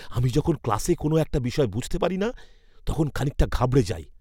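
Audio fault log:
No fault was found anywhere in the speech.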